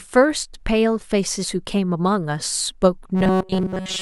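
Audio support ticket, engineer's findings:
Rigid metallic 188 Hz buzz over speech, 3.15 s to end. Robotic sound from repeated short buffers, likely playback starving and looping a 5.3 ms chunk while most incoming audio is skipped.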